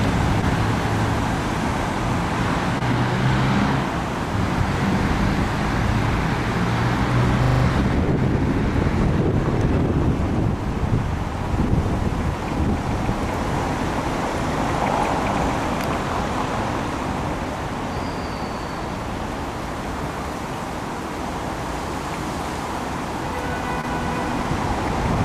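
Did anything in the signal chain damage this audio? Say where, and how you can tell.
Yes. At the network stage there is short concealed packet loss from 2.78 to 2.82 s and again from 23.81 to 23.85 s. In each case about 20 ms of audio never arrived, and the decoder filled it by extending the preceding sound for roughly 19 ms before blending back in. You hear a brief smear rather than silence or a hard click. That is what separates it from a dropout in wiring or a buffer underrun, which would leave a gap or a sharp discontinuity.

The second fault is a system hang loop, at the driver or buffer stage, from 7.44 to 7.64 s. A single 40 ms piece of sound repeats exactly five times, at a loop rate of 25 Hz. The host stalled while the hardware kept replaying the same stretch of its ring buffer, and essentially no audio was lost around it. Packet-loss concealment would decay and vary. Here the repetitions are identical copies at a rigid rate, which points to the buffer rather than the network.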